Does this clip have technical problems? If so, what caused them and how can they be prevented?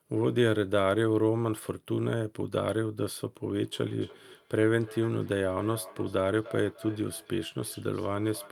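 Yes: from 3.61 s to the end, feedback echo between two devices repeats the speech roughly every third of a second, at about -19 dB. Two devices sharing a room and call are looping each other's audio. Mute or leave one device.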